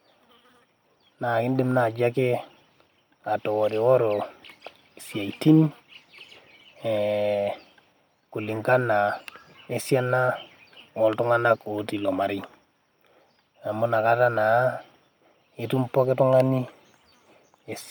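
No technical faults are audible in this speech.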